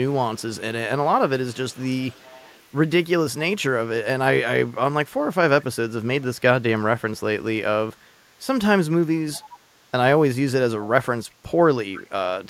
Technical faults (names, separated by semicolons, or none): echo leak